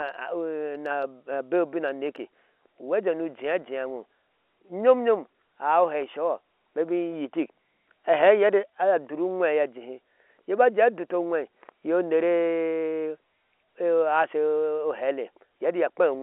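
No faults can be heard anywhere in this speech clip. It carries the narrow telephone band of G.711 telephone coding, roughly 300 Hz to 3.4 kHz, with at most a faint trace of coding damage.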